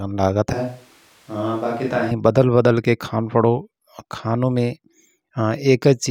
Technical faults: switch to a distant microphone

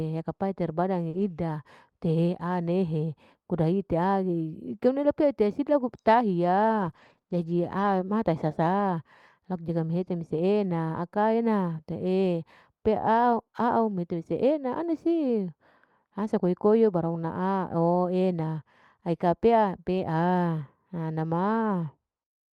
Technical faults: short concealed packet loss; lost packet rebuilt from error correction; scattered short gaps

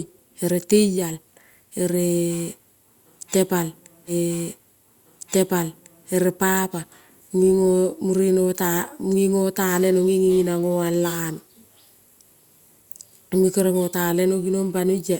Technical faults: stream segment repeated

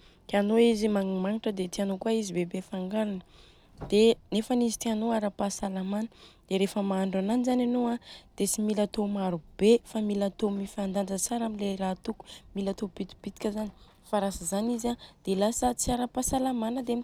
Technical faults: none

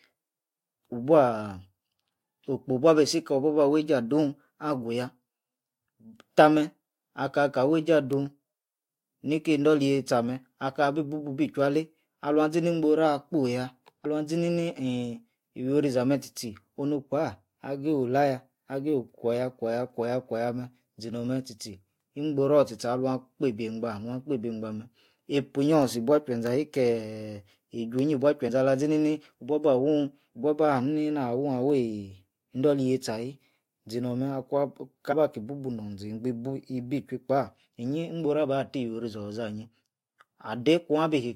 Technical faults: compressed frames skipped

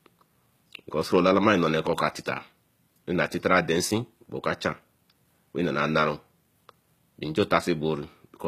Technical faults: HE-AAC compression

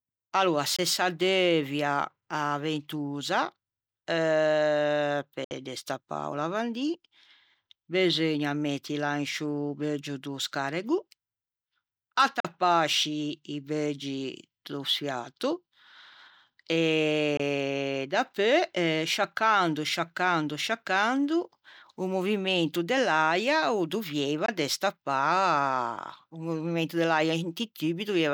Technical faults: Bluetooth dropout

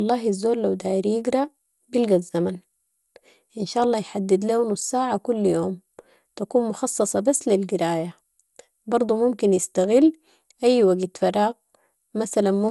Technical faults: generation loss

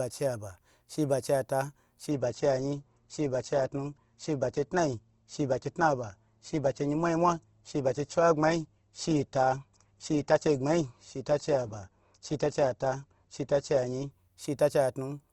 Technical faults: adaptive stream at a lower bitrate

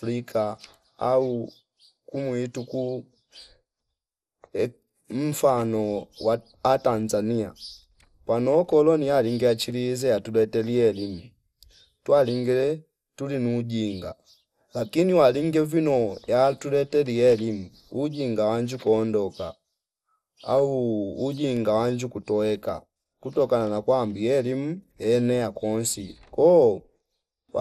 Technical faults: MP2 compression

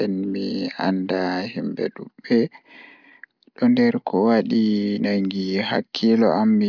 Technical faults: none

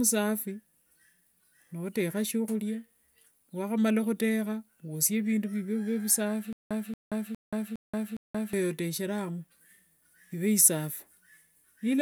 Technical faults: stutter with silent gaps

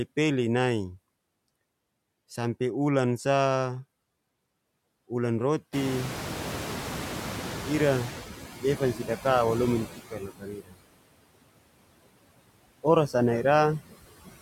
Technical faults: noise suppressor artifacts; noise suppressor catching up; speech cut by the noise suppressor

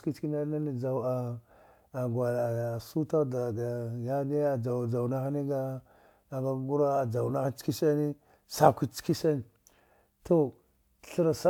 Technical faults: dropped samples

